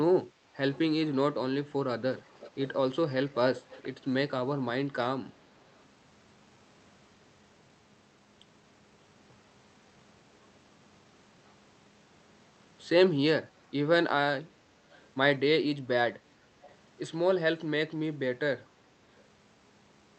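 Echo leak appears at 0.71, 2.17 to 2.50, 3.28, 3.57 to 3.83, 5.78, 14.91 to 15.02 and 16.64 to 16.76 s: faint copies of the speech trailing the original by 436 ms. The strongest, around 2.2 and 3.6 s, sit roughly 20 dB below the speech; the weakest, near 5.8 s, sits roughly 40 dB below. The likely cause is a loudspeaker at the far end whose echo canceller let part of the returning speech through.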